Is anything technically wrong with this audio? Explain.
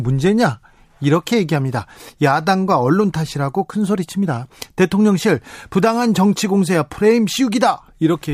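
No, nothing technically wrong can be heard in this speech recording; the signal stays steady and intact throughout.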